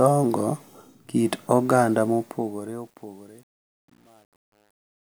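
From 2.07 s, just after "kit oganda", the speech fading out grows gritty and grainy. From 2.62 s to the end at 5.17 s the grit is at its worst. This is truncation distortion on a fade: the fade was computed with too few bits and no dither, which sounds like roughly a 9-bit stage, so the quietest part of the waveform collapses into coarse square steps.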